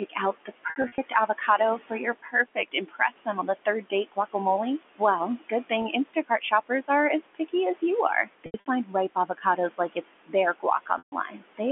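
Noise suppressor artifacts run through the whole clip: the suppressor pulls the room noise down by about 18 dB, so it dips between phrases and swells under them.

Speech cut by the noise suppressor appears from 0.09 to 3.28 s. The suppressor mistakes soft speech for noise and turns it down by up to about 21 dB, swallowing roughly a second's worth of quiet sounds and word endings.

Packet loss with pitch repetition hits from 0.7 to 0.98 s, with 140 ms missing in gaps scattered over 280 ms, the longest 60 ms. The receiver repeats the last pitch period, giving brief held, buzzy fragments.

Speech cut by the noise suppressor returns from 3.65 to 4.35 s, dropping about 150 ms of speech by up to about 20 dB. From 5.4 to 6.9 s it does the same, fainting about 300 ms by up to about 18 dB.

Within that span, packet loss with pitch repetition at 5.82 s fills a single 20 ms gap with a repeated pitch cycle, heard as a tiny buzzy hitch.

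Speech cut by the noise suppressor then covers 8.24 to 11.61 s, turning down roughly a second of soft speech by up to about 18 dB.

Packet loss with pitch repetition strikes twice more inside it. From 8.46 to 8.66 s, 140 ms is lost over 200 ms, with runs up to 80 ms. From 10.98 to 11.12 s, a solid 140 ms gap outlasts the roughly 50 ms fade of the repeated pitch, so the buzz dies into silence before the speech cross-fades back.

The room noise sits about 14 dB below the speech, and the G.711 A-law telephone coding keeps everything within the 250 to 3400 Hz line band.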